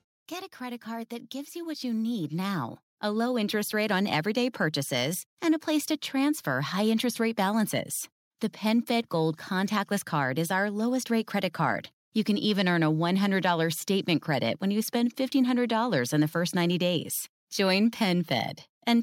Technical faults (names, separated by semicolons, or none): automatic gain rising